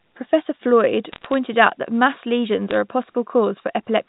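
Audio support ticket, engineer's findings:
Bit errors on a digital phone line, 1.09–1.34 s (just before "out that mass lesions") and 2.71–2.74 s (between "out that mass lesions" and "are a"). Burst of sharp ticks and crackle over intact speech. Probable component: transmission link carrying the G.711 A-law stream. Mechanism: flipped bits, a fraction of a percent, each corrupting a single logarithmic sample; hits on sign or high-order bits throw that sample far off, producing clicks. Band-limited telephone sound under 4 kHz is consistent with the codec itself.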